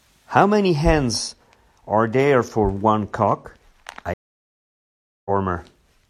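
At 4.14 s a stream reconnect cuts the speech: about 1.1 s of silence, then it resumes roughly 0.7 s later in the stream, not picking up where it stopped like a buffer underrun.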